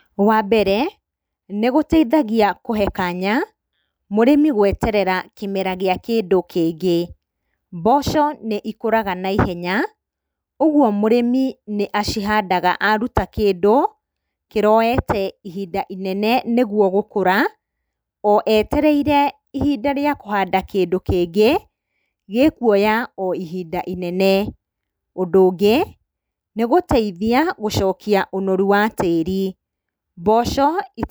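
No technical faults can be heard anywhere in the recording.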